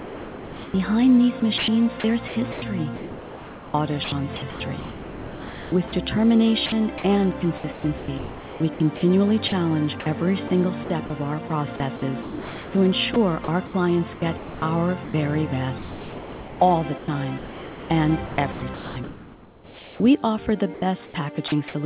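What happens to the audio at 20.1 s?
Nothing goes wrong at 20.1 s: the audio there is intact, carried through the call path as usual with the band-limited sound of its G.711 A-law codec, which leaves nothing above 4 kHz.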